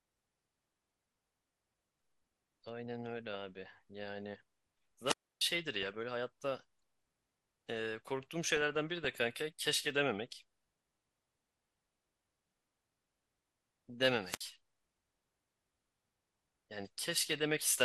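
Throughout the speech the top end is dull and the sound has a granular, gurgling roughness, likely MP2 compression at a low bitrate, roughly 80 kbps. With too few bits, the upper sub-bands drop out and the remaining bands are coarsely quantised.

From 5.05 to 5.42 s a wireless microphone squelch dropout occurs. The FM signal fades with a brief rise in hiss, the receiver's squelch mutes the output for about 0.3 s, and the speech comes back.

From 8.46 to 9.07 s there is DAB burbling. Bit errors at a rate of a few per thousand slip past error correction into the MP2 data, corrupting audio across what sounds like a couple of dozen frames. Short blips of noise appear in single sub-bands.

At 14.24 to 14.45 s a second squelch dropout occurs. This mute is much shorter, about 60 ms, heard as a quick gap before the signal recovers.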